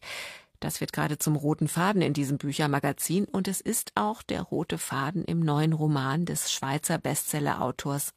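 No technical faults can be heard anywhere in this speech recording. There is no moment in the audio that calls for a timestamp or an account of something going wrong.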